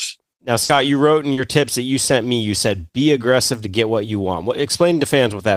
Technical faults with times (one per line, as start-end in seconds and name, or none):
0.63-0.71 burst of packet loss
1.33-1.39 short concealed packet loss